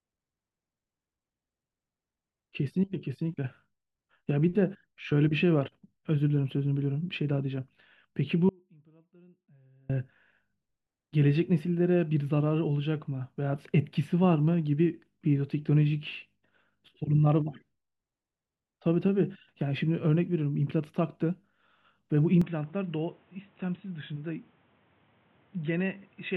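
A speech recording with two faults worth flagging. From 8.49 to 9.90 s there's an audio dropout to a faint residue: for about 1.4 s the voice cuts out abruptly and only faint sound remains, something like 35 dB down, so the path stayed live while the signal was likely lost upstream. Then at 22.42 s, with no gap at the switch, the sound goes duller and a few dB quieter, with nothing above 3.9 kHz and a noise floor roughly 30 dB below the voice, which points to an input switched to a poorer device, likely a headset or lesser mic, running to the end.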